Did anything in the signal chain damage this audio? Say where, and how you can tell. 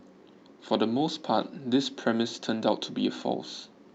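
No, nothing in the chain has hurt this speech; it came over a WebRTC call path with Opus, and the top end stopping near 8 kHz is just how that link was set up.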